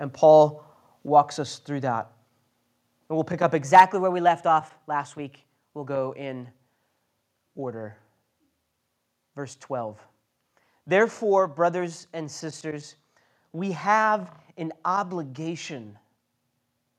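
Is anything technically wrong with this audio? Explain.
Yes, there are several faults.

At 1.08 s, just before "us through that", the call software likely lowered the microphone's input volume in one step, a microphone volume stepped down of about 3 dB. The speech and the background drop together, abruptly, with no fade.

From 3.64 to 5.88 s, right after "we'll pick up", a drift correction step likely sped up playback by 5.81% while the clock-matching logic refilled or drained its buffer. Pitch rises by about 98 cents, almost a semitone.

Between 3.75 and 3.82 s, microphone overload likely drove peaks about 4 dB past the converter's ceiling, flattening roughly one sample in twenty. The loudest moments gain a harsh, crackling edge.

At 3.80 s, still just after "we'll pick up" and directly on that distorted peak, the software likely stepped the input down again by about 2 dB, so the level drops suddenly a second time.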